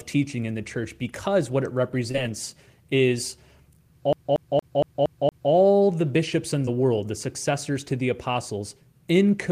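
At 2.11 to 2.16 s there is a short concealed packet loss: about 20 ms of the call arrived too late for the decoder, and the receiver covered the gap by extending the preceding sound for roughly 24 ms before blending back into the real signal. It comes across as a brief smear rather than a repeat, and the same thing happens again at 6.65 to 6.69 s, with about 17 ms of fill. Each is a single soft blur, not a rhythmic pattern.

From 4.13 to 5.52 s the audio behaves like a CD stuck on one turn. A 232 ms stretch plays six times in succession, each pass cut by a short mute where the player jumps back to the same spot. The result is the fast, even stutter of a skipping disc. What separates it from the concealment glitches is that the identical fragment audibly repeats at a steady rate, instead of one brief continuation fading back into new sound.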